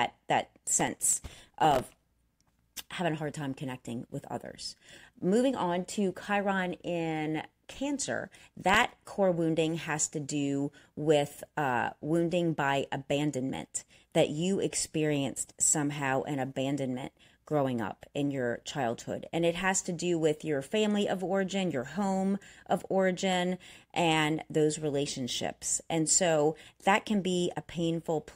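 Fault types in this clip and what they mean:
Processor overload crackle: the machine couldn't keep up with its tiny audio buffers, missing deadline after deadline. Here it's a gritty tearing from about 0.81 to 2.05 s, riding on the speech and then clearing. Each miss replays a sliver of old audio with hard edges, and dozens of them stack into that crackle. The grain fits a very short buffer of around a millisecond and a half.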